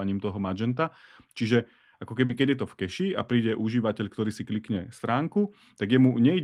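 A lost packet rebuilt from error correction at about 0.69 to 0.71 s leaves no gap, but that 20 ms of speech turns rougher and noisier, which fits a single packet replayed from the low-bitrate copy carried in the next one.

Short concealed packet loss follows at 2.25 to 2.31 s. About 40 ms arrived too late, so the receiver extended the preceding sound and blended back, heard as a brief smear. Overlapping its end, from 2.29 to 2.47 s, a second error-correction rebuild spans 100 ms, pointing to roughly five lost packets restored from their coarse copies and sounding grainier.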